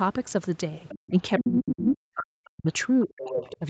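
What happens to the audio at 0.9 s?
From 0.88 to 1.1 s the other side's voice leaks through, faint and about 20 dB down, likely loudspeaker echo the canceller missed: a distinct second voice, not the talker's own reverberant tail.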